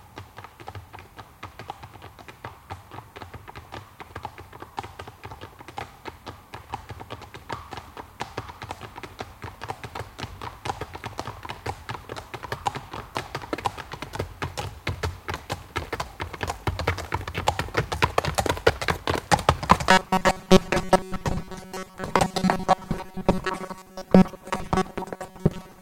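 At 6.7 s the audio jumps forward with no gap, skipping about 40 ms of material and joining the two sides directly. This is likely a dropped buffer (overrun): the samples were overwritten by the hardware before the software read them.

From 19.91 s to the end, the sound becomes a rigid, metallic buzz at 188 Hz that follows the original only loosely. This is likely robotic sound from repeated short buffers. A period of about 5.3 ms keeps being replayed while most of the incoming audio, around 70 percent, is skipped.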